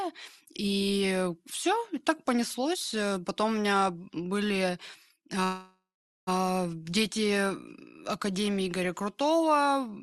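Speech over a call link whose band stops near 12 kHz has a call audio freeze from 5.43 to 6.29 s: the sound smears into a fading buzz, then about 0.42 s of silence, likely packets delayed until the jitter buffer ran empty. Speech resumes intact afterwards. On a spectrogram the harmonics flatten into horizontal streaks, then go dark before speech returns.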